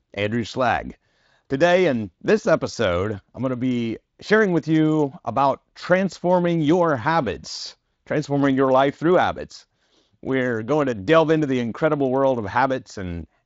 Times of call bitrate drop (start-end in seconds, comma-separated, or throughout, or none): none